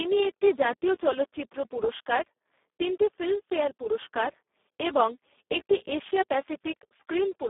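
The whole clip carries heavy Speex codec damage: the speech sounds hoarse, buzzy and close to robotic, pointing to a very low setting around 4 kbps, squeezed into roughly 300 Hz to 3.5 kHz, with nothing above 3.8 kHz.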